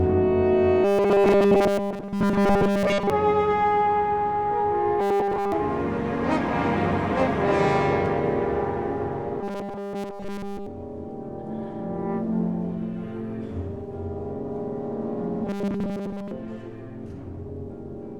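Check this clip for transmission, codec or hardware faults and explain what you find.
There is one fault, heard four times: robotic sound from repeated short buffers, at 0.84–3.10 s, 5.00–5.52 s, 9.41–10.67 s and 15.45–16.32 s. In each stretch the audio turns into a rigid, metallic buzz fixed at 200 Hz that only loosely follows the sound, with essentially all of it replaced. The likely cause is late-arriving audio, with the playback side looping the last segment, about 5 ms long, so the repetition rate imposes that pitch.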